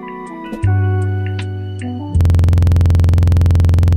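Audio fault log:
2.21 s to end: system hang loop. A 46.44 ms slice of audio repeats exactly, about 21.5 times per second, through to the end of the clip. It sounds like a rapid, rattling stutter: playback froze while the hardware kept cycling its ring buffer, which fits a 2048-sample buffer.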